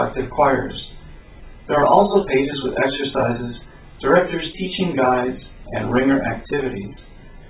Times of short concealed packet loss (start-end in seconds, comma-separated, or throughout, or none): 1.40-1.44, 4.52-4.56